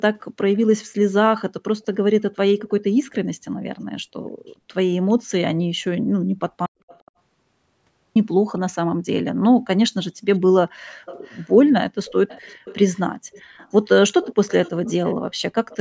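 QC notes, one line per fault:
0.37–0.64 s, 6.88–7.11 s, 11.06–11.47 s, 12.05–13.0 s, 13.32–13.72 s, 14.22–15.15 s, 15.69–15.77 s: echo leak. A faint copy of the speech trails it by 0.41 s, about 20 to 35 dB down. This is likely a far-end loudspeaker whose echo canceller let some of its pickup through. Unlike room reverb, it is a discrete, separated repeat.
6.66–8.16 s: audio dropout to silence. The speech cuts off abruptly for 1.49 s into silence with no room tone, then resumes mid-flow, and whatever came in between is lost. This is likely lost input with silence written. Gating would leave some residue, but this gap is completely empty.
10.71–11.03 s: background gated by the echo canceller. The room sound dips sharply, by up to about 39 dB, for roughly 0.3 s while the far end plays, then recovers. The canceller is suppressing the microphone. This is a brief dip that lifts again, not a full dropout to silence.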